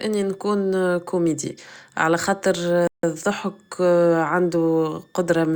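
A faint high whistle runs under the speech for the whole clip, its pitch wandering between about 1.69 and 1.86 kHz and sitting far below the voice. This switching supply whistle comes from a power supply cycling at an audible rate, its frequency shifting with load.

Just after "نكون كوميدي على خاطر", at 2.87 s, the audio drops to silence and picks up at 3.03 s exactly where it left off. This rebuffering stall happened because playback ran out of downloaded data and waited, adding 160 ms without losing anything.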